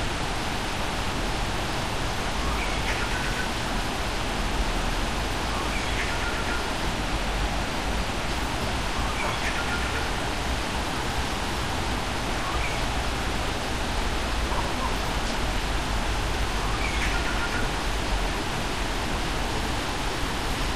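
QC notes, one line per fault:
19.5–20.76 s, drift correction step: playback abruptly runs 6.5% faster, raising pitch 109 cents, just over a semitone, through to the end, likely a clock-matching resampler draining its buffer in one jump. On a spectrogram every partial steps upward together, and the waveform's periods shorten suddenly.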